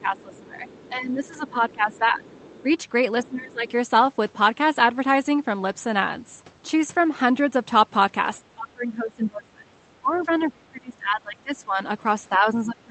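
A speech recording with two technical problems. There is speech suppressed in double talk from 0.00 to 2.64 s, dipping by roughly 15 dB, from 3.17 to 3.67 s, dipping by about 20 dB, and from 8.4 s to the end, dipping by about 25 dB. The level drops and sections thin out. The likely cause is an echo canceller ducking the talker while both sides spoke. From 0.17 to 3.71 s, the other side's voice is leaking through, faint, about 25 dB below the talker. This is likely loudspeaker echo left in the microphone signal. The call path is audible as a band limit near 8 kHz, which fits the Opus codec.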